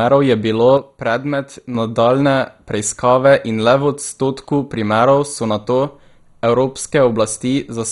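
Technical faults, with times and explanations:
Throughout: MP2 compression. The speech sounds dull and boxed-in, with a gurgling, grainy edge, and nothing at all comes through above about 11.2 kHz. That's the sound of a Layer II encoder likely running short of bits, which fits a rate of around 56 kbps. It shuts off the top sub-bands entirely, lets bands flicker on and off, and quantises the rest coarsely. Pretty heavy damage overall, much like low-rate digital radio.
0.78 to 1.75 s: one channel drops out. For about a second the speech suddenly sits lower, down by about 6 dB, and then it snaps back at 1.75 s. The likely cause is one side of the stereo pair vanishing for that stretch. Once the two sides are folded to mono, anything common to both loses half its contribution, which explains the drop. Anything that lived only in the missing side disappears completely.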